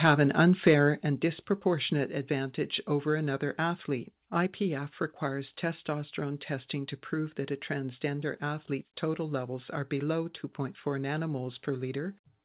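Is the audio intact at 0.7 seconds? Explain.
No. From 0.66 to 0.74 s there is microphone overload: peaks run about 3 dB past the converter's ceiling, so a small share of samples are flattened, likely from too much input gain. The harsh crackle sits on the loud peak itself, not spread across the 4 kHz call band.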